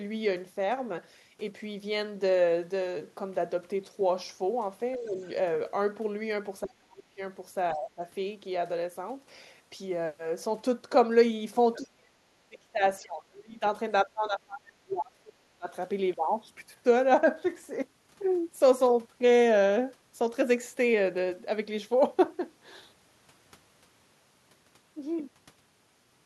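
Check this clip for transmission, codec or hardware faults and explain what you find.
Two echo-canceller faults turn up in the speech. The first is speech suppressed in double talk, at 4.97–5.21, 6.63–7.2, 7.74–8.02, 11.77–12.83, 13.01–13.63 and 14.04–15.69 s. The talker's voice sinks by roughly 10 to 40 dB, most deeply in the later stretches. The likely cause is the canceller mistaking the talker for echo and attenuating both. The voice dips, loses its high end or cuts out in pieces.

The second is the other side's voice leaking through, at 5.09–5.27 s. A faint second voice, around 40 dB below the talker, likely slips past incomplete echo removal. It is a separate, quieter voice rather than a distortion of the talker's own.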